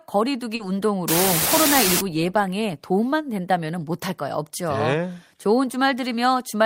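At 0.55 s, running to about 0.61 s, there's a short concealed packet loss: roughly 40 ms of the speech never arrived in time, so the receiver papered over the gap by extending the preceding sound and blending back in, leaving a brief smeared wobble. Then from 1.08 s to 2.01 s an unreliable data bit kicks in. One data line is flipping its bit at random, so samples get hit with identically sized spikes, giving a steady crackly fizz that doesn't let up even between sounds.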